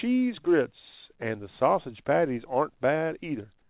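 Comfort noise in place of the background from 3.62 s: the final 80 ms turns to flat, featureless hiss about 5 dB quieter, likely synthesized while transmission paused.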